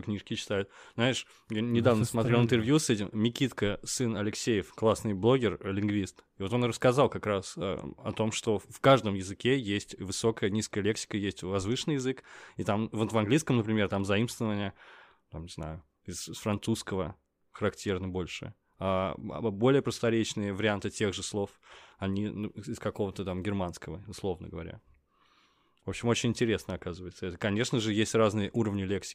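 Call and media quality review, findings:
No audible faults found in this speech recording.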